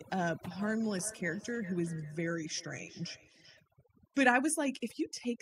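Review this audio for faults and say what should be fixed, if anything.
Throughout the speech, the background sinks to near silence dotted with twinkling specks. This is overdone noise removal: the reducer was set so hard that frequency bands close to its noise estimate get pushed down or cut entirely, taking quieter parts of the voice with them. Lower the reduction strength or improve the recording conditions so the tool needs less aggressive settings.

From 0.5 to 3.65 s, each word returns at a steady interval of roughly 0.4 s, thinner and more ringing, peaking about 17 dB below the speech. That is a feedback echo between two devices: one device's speaker replays the other's microphone, which picks it up again, and neither echo canceller removes the other device's playback. Mute or disconnect the second device in the room, or have everyone share one device.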